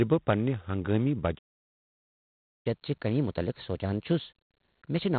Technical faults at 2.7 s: G.726 ADPCM; playback stall; catch-up at higher speed

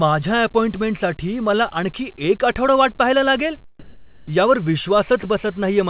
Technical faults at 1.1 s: none

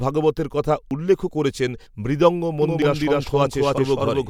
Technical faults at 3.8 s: doubled audio track; audio missing between chunks

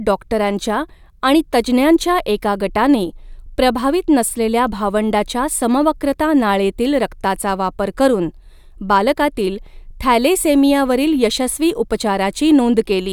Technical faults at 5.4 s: none

